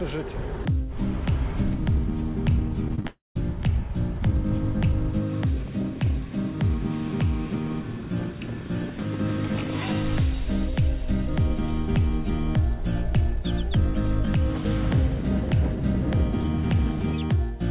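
From 2.88 to 3.05 s the sound turns choppy and robotic. Four short holes, the longest 20 ms, are patched by stretching the last sound: repeated packet loss, with about a third of the span concealed. From 3.07 to 3.41 s a fading buzz gives way to about 0.18 s of silence before the audio resumes with a piece gone, likely a long network dropout.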